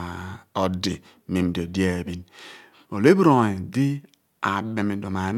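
No technical faults can be heard anywhere in the recording. There is nothing in the audio to point to or place in time.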